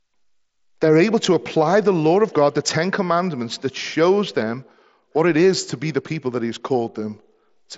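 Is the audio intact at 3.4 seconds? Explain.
Yes, the audio is intact at 3.4 seconds: nothing there breaks, drops or distorts the speech.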